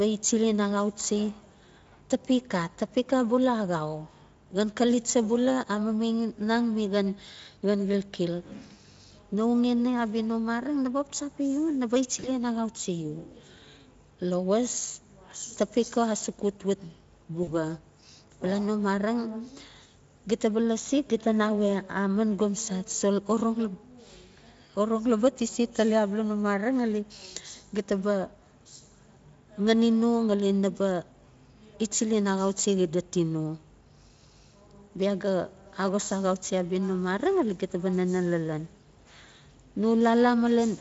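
At 12.19 s the audio breaks into VoIP packet loss concealed by the speech codec. About 40 ms of data goes missing, which fits two lost frames. The decoder fills the gap by repeating its last pitch and filter at falling gain. That gives a brief buzzy or noisy smear that fades. The sound stays weak until 12.39 s. At 17.43 s the same thing happens, again about 40 ms lost, recovering by 17.53 s. Between the dropouts the Speex codec shows no more than faint damage.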